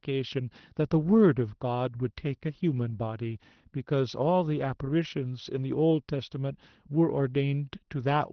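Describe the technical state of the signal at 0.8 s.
At 0.8 s the speech is intact, with no dropout, click, distortion or other fault, and what can be heard there is only the ordinary character of the WebRTC call path, whose Opus coding limits the top of the band to about 6 kHz.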